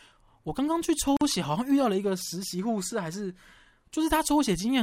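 At 1.17 s a gap at a join of encoded pieces cuts about 45 ms of silence into the speech: encoder delay and end padding left untrimmed, smeared edges, then resumption.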